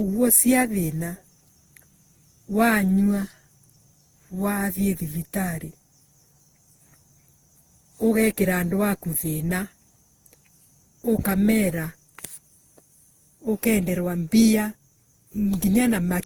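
From start to end, the speech shows generation loss, likely from being decoded and re-encoded around ten times through a lossy codec whose character points to Opus at about 48 kbit/s. Each pass requantises the signal on a shifted frame grid, so the errors stack instead of staying put. The result is a swirly, hollow texture with smeared consonant onsets, rougher than one such encode would leave, while content still reaches up to 20.2 kHz.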